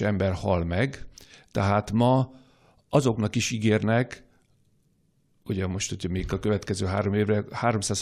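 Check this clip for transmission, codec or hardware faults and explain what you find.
I find no faults in this clip.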